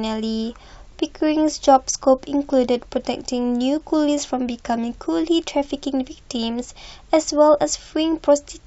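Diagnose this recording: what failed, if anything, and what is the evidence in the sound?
Nothing failed; no faults heard.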